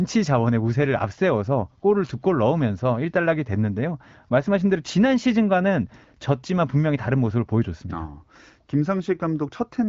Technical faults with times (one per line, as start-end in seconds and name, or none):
none